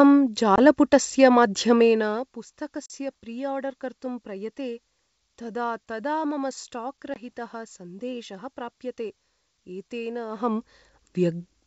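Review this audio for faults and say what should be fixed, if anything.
There's packet loss on an ADPCM call at 0.56 s (about 20 ms), 2.86 s just before "प्रिआर्डर् कर्तुं प्रयते" (40 ms, roughly two packets), and 7.14 s right after "तदा तदा मम स्टाक्" (20 ms). Each hole is silent and hard-edged. Afterwards the decoder's predictor and step size are out of sync with the sender's, so the speech comes back slightly distorted for a few tens of milliseconds. To prevent it, add jitter buffering with packet loss concealment, or send redundant packets.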